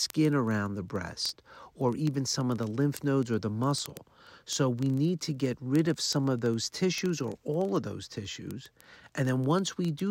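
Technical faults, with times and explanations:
0.10 to 10.10 s, word clock ticks: a steady run of sharp little ticks, roughly one every 40 ms, some three hundred of them, and not all equally loud. The receiving end is running on its own clock, unlocked from the sender's, and the two drift apart by something like several hundred parts per million. Each time they slip past each other, a single sample gets dropped or repeated, and that tiny discontinuity in the speech clicks.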